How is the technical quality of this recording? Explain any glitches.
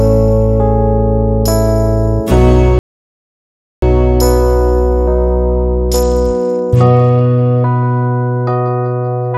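The recording has two clear technical faults: a silent dropout early on and a stretch of degraded, band-limited sound later in the clip.

From 2.79 to 3.82 s the output goes completely silent for about 1.03 s, then resumes. This is a playback stall. The sound stops mid-flow rather than fading, and nothing is heard until the player recovers. The likely cause is the player running out of buffered data, or its audio thread being blocked, so no samples reached the output for that second.

From 5.46 to 8.05 s there is a Bluetooth SBC bit pool drop. The top end turns dull and a gritty, grainy noise sits on the sound until it clears at about 8.05 s. The change in quality suggests the encoder cut its bit pool sharply, roughly from 31 down to 11, which fits a link rate near 83 kbps. This typically happens on a congested wireless link. With so few bits, the upper sub-bands get little or nothing and the remaining bands are coarsely quantised, which causes both the lost treble and the grit.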